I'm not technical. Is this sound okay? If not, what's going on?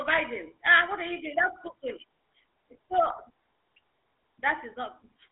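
No. For the whole clip, the speech has passed through the GSM full-rate codec, the compression used by early mobile phones. It rebuilds the voice from a rough model driven by regular pulses, which gives it a buzzy, gravelly roughness that is plainly audible. Nothing above about 3.7 kHz survives, so it also sounds narrow and muffled. A landline squeezes the sound into the same narrow range, but a landline voice stays smooth. The grainy buzz is what marks this as GSM.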